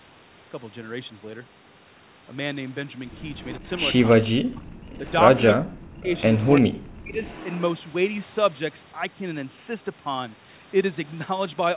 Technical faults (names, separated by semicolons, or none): echo leak; speech suppressed in double talk